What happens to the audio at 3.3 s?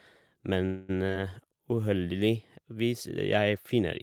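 At 3.3 s the speech plays through intact, with no dropout, click, distortion or other fault at that point.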